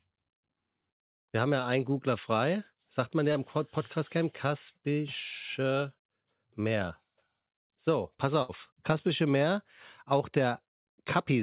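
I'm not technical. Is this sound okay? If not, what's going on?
No, there are two short glitches where parts of the call went missing on the way.

At 3.32 s, just after "man ja", there is a short concealed packet loss. About 30 ms of the sound never reached the receiving end in time. The receiver covered the hole by stretching out the sound it had just played, then slid back into the real audio. You hear this as a tiny smear or blip, and a very short sound there could be lost.

From 8.42 to 8.52 s there is a burst of packet loss, a longer run of missing sound of about 60 ms. The receiver again filled in by carrying on the last sound for about 66 ms, fading it as it went. So you hear a brief held buzz or fading hiss, and then the speech picks up a little further on, with that short stretch simply gone.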